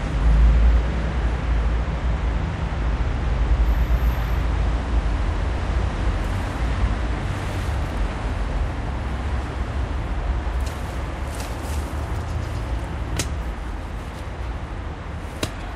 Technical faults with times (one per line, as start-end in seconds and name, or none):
13.69 damaged data in a compressed stream